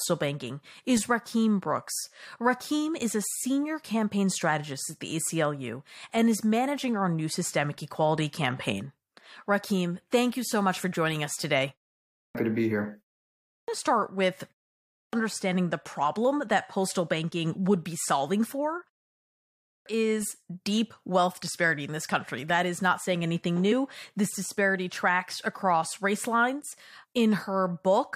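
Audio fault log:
12.02, 13.32, 14.82 and 19.5 s: clipped start after a pause. After each 0.31 to 0.69 s gap the output device is still waking, so roughly 310 to 360 ms of onset vanishes and speech bursts in abruptly. The waveform leaps from flat silence straight into speech, and the spectrogram shows a hard vertical edge.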